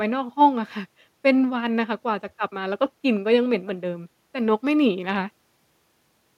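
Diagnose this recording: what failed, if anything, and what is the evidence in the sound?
Nothing failed at any stage; no audible defect.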